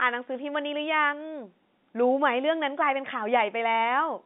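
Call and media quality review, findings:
No faults found: the speech carries the normal band of a G.711 A-law telephone line at 64 kbps, roughly 200 Hz to 3.6 kHz, with at most a faint coding texture beneath it.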